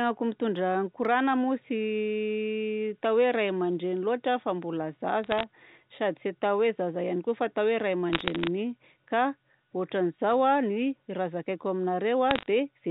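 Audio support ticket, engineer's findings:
Bit errors on the digital phone line: crackly ticks at 5.24–5.43 s after "loatra fa mbola", 8.13–8.48 s after "fa atao hoe ray", and 12.31–12.46 s. Flipped bits on the A-law line spike single samples.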